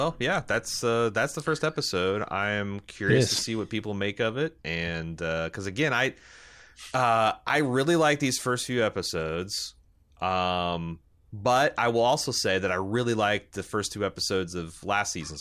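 Nothing in this speech recording stands out as a technical fault, so there's really no problem to walk through.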